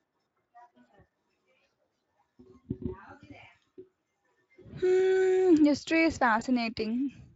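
Speech clip with one dropout from VoIP packet loss concealed by the speech codec, at 6.39 to 6.43 s, just after "history is". The decoder fills a gap that fits a single lost 20 ms frame by extending the previous pitch and spectral shape at falling gain, so the sound briefly smears into a buzzy tone or coloured noise that fades, and it sounds weak or distorted for tens of milliseconds afterwards, through the lightly coloured Speex coding.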